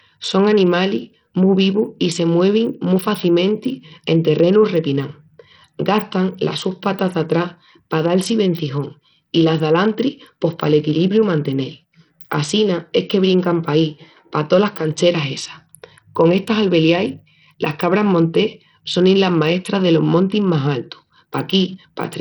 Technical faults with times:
0.00-22.20 Bluetooth SBC compression

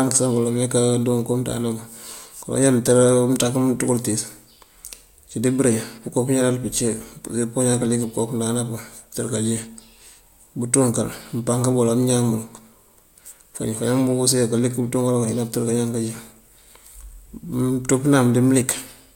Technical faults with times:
none

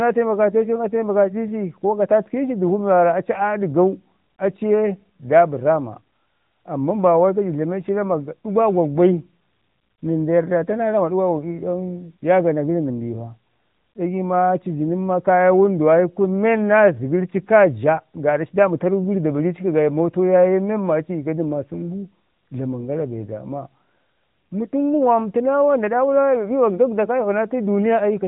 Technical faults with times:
0.00-28.27 AMR narrowband mobile codec

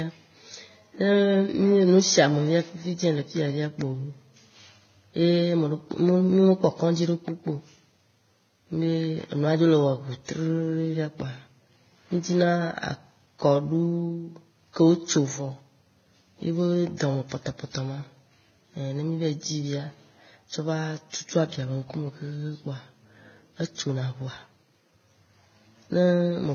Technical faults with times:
0.00-26.54 transcoding between lossy codecs

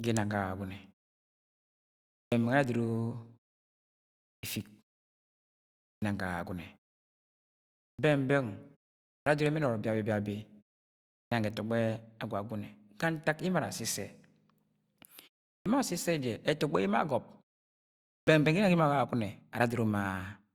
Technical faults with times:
2.25-2.32 clipped start after a pause
4.36-4.43 clipped start after a pause
5.95-6.02 clipped start after a pause
7.92-7.99 clipped start after a pause
9.20-9.27 clipped start after a pause
11.24-11.32 clipped start after a pause
15.58-15.66 clipped start after a pause
18.20-18.27 clipped start after a pause

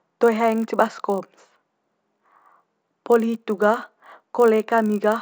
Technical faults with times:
0.00-5.22 resampler restarted on every block

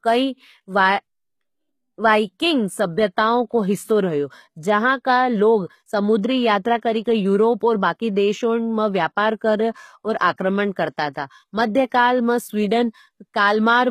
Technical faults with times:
0.00-13.90 HE-AAC compression

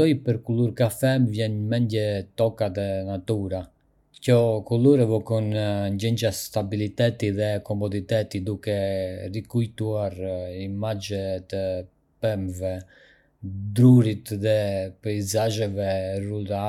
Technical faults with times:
none

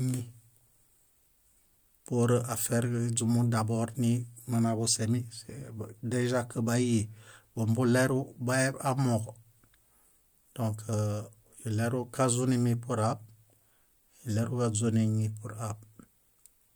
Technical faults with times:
none

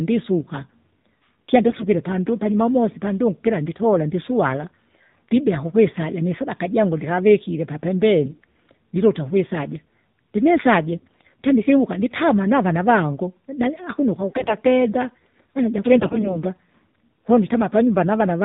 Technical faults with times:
0.00-18.45 AMR narrowband mobile codec
1.68-1.88 AMR bit errors
8.24-8.42 AMR bit errors
10.98-11.28 AMR bit errors
14.29-14.55 AMR bit errors
15.96-16.43 AMR bit errors

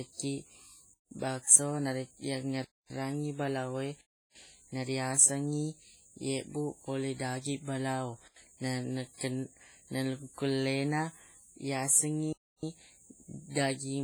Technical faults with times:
0.00-14.04 WMA compression
0.94-1.11 block of digital silence
2.65-2.90 block of digital silence
4.01-4.35 block of digital silence
8.28-8.36 block of digital silence
12.33-12.63 block of digital silence

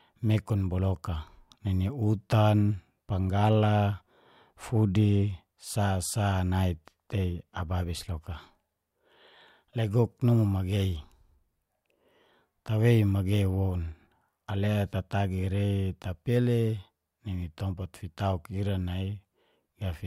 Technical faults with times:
none

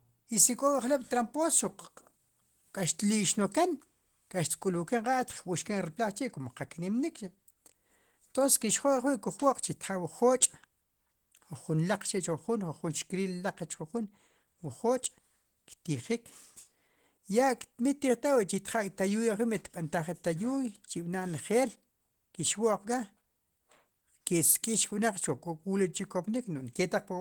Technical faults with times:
0.00-27.21 Opus compression

